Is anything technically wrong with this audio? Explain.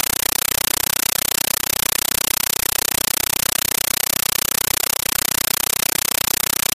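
Yes. Throughout the clip, a compressed stream is played as audio: an AC-3 (Dolby Digital) bitstream is treated as ordinary samples instead of being decoded, so no speech comes through. Each coded frame plays as a burst of harsh noise about 9.33 ms long followed by silent padding, repeating 31.25 times a second, which fits a 448 kbps stream. Unlike steady hiss or clipping distortion, the static chatters at that fixed rate, very loud and with no trace of the speech underneath.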